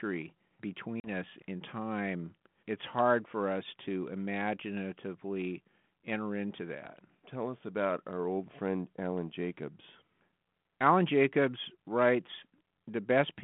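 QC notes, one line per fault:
1.00–1.09 s, packet loss on an ADPCM call: a hard-edged gap of silence about 40 ms long, consistent with a couple of lost packets, cuts into the speech. Because G.726 at 32 kbit/s codes only differences from an adaptive prediction, the decoder's predictor and step size drift out of step with the sender's across the gap. The speech returns with some roughness, which settles over the following tens of milliseconds.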